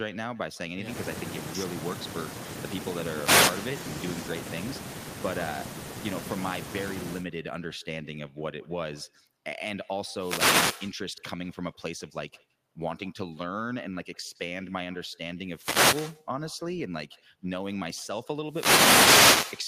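A speech recording in which every phrase is trailed by a faint, thin copy arriving roughly 150 ms later and about 19 dB below the direct voice. This is echo with no canceller: the far end's loudspeaker feeds back into its microphone and the sound returns after the network round trip. Four short bursts of swishing static also occur, at 3.11 to 3.64 s, 10.15 to 10.85 s, 15.46 to 16.21 s and 18.46 to 19.61 s. Each is a wireless microphone noise hit, where the FM radio link fades as reflections cancel and receiver noise surges over the signal.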